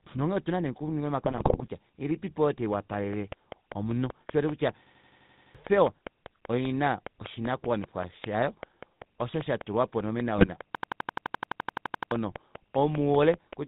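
Across the whole recording the speech carries the buzzy, gravelly roughness of the GSM full-rate codec, which fits a 13 kbit/s coding rate. The decoder rebuilds the voice from a vocal-tract filter excited by sparse, regularly spaced pulses, so the fine texture of the sound is replaced by a coarse grain. On a spectrogram, energy stops at about 4 kHz with an empty band above it, and the harmonics look smeared and ragged.

From 1.24 to 1.68 s, between "nonghee otuna nee okuninga" and "ilipipo oyo", GSM bit errors break the sound into squawks, pops and gargling. Corrupted filter, pitch and gain values distort whole frames. A second, shorter burst appears at 10.36 to 10.49 s. On the waveform these frames show sudden level jumps. The spectrogram shows blocky patches with misplaced formants in 20 ms steps.

After "ilipipo oyo", from 2.74 to 13.54 s, a train of clicks ticks steadily at about 5.1 per second, roughly fifty in all, peaking about 10 dB above the signal. 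The clicks can be heard through pauses as well as over the speech, and their similar shape and regular pace point to a likely source in nearby electrical interference or a faulty connection or power supply. The waveform shows evenly spaced thin spikes, and the spectrogram shows evenly spaced vertical lines spanning the band.

From 4.86 to 5.55 s a system hang loop repeats one 85 ms fragment eight times, a machine-gun stutter at 11.7 Hz, which fits a 4096-sample ring buffer cycling while the system froze. Roughly 0.7 s of speech is lost here. A longer hang runs from 10.75 to 12.12 s with sixteen repeats, losing about one and a half seconds. On the waveform each hang appears as an identical block copied end to end, and the spectrogram shows a repeating tiled pattern.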